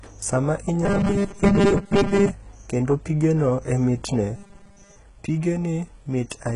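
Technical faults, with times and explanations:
Throughout, HE-AAC compression: the treble has no content above 11.1 kHz, likely from low-bitrate HE-AAC with heavy coding damage; the spectrogram shows a hard ceiling with copied, misaligned upper bands.
0.85–2.31 s (ending just before "kendo pigeno e mitne") and 4.36–4.96 s (just after it), robotic sound from repeated short buffers: most of the audio is a rigid 200 Hz buzz, which fits 5 ms blocks being replayed, likely from late-arriving audio. On a spectrogram this shows as evenly spaced 200 Hz harmonic stripes, and the waveform shows a short repeating pattern.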